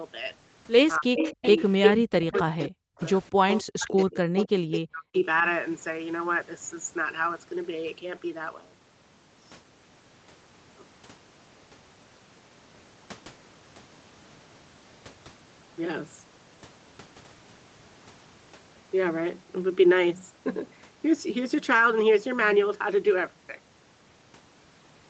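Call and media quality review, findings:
Speech suppressed in double talk: near-end speech dips or drops out while the other side talks. 1.0–1.43 s (about 150 ms hit, deepest about 35 dB down), 2.21–2.92 s (about half a second, about 40 dB), 3.44–5.25 s (about 1.5 s total, about 40 dB). Likely the echo canceller's suppressor treating overlapping talk as echo and ducking both. Waveform shows the envelope pinched to near silence in patches. Spectrogram shows full-band holes.

Echo leak: a delayed copy of the voice comes back 277 ms late, in scraps. 1.15–1.93 s at roughly speech level, 2.33–2.65 s about 15 dB down, 2.98–3.03 s about 30 dB down, 3.49–3.62 s about 5 dB down, 3.98–4.79 s about 10 dB down. Likely a loudspeaker endpoint whose canceller left residual echo and sent it back. On a spectrogram, the harmonic pattern repeats, shifted about 0.28 s later, and overlaps fresh speech. On the waveform it shows as a smeared second envelope.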